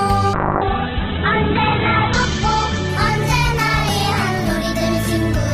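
A call bitrate drop starts at 0.35 s and lasts to the end of the clip. The connection's bandwidth estimate collapsed and the encoder was forced onto a tiny bit budget, which points to a fall from roughly 96 kbps to about 7 kbps. To cope, the codec narrowed the audio band from 20 kHz to 4 kHz and coded what remained coarsely. The sound turns muffled and rough-edged, bottoming out for about 1.05 s.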